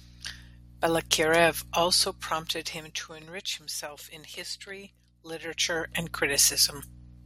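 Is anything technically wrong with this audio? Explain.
Yes. Zipper noise occurs twice in this speech clip. From 1.77 to 3.34 s the level drops by roughly 15 dB in 1 dB steps, about ten per second. From 5.29 to 5.94 s it rises by roughly 15 dB in 2 dB steps at a similar rate. The gain jumps between fixed values with no smoothing, and each jump puts a small discontinuity in the waveform. The result is a ticking, zipping texture riding on the speech while the level moves.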